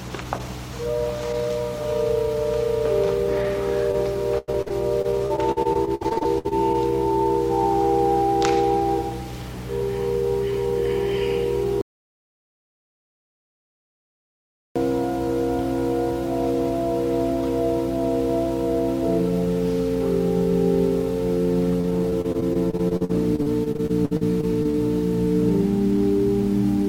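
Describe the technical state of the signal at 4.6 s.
Packets were repeatedly lost or delayed from 4.38 to 6.53 s, and 4.6 s falls inside that repeated packet loss. Each hole, up to 96 ms, was filled by stretching the preceding sound, concealing about 29% of the span and leaving choppy, robotic audio.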